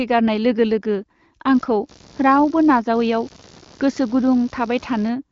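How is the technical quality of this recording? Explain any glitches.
The recording has one clear flaw, computer activity noise, heard over the speech, which carries the narrow top end of an AMR wideband (HD Voice) link near 7 kHz. From 1.54 s to 5.10 s, computer load changes disturb the audio's shared ground, adding a buzzing chirp that pulses around 70 times a second, roughly 25 dB below the speech.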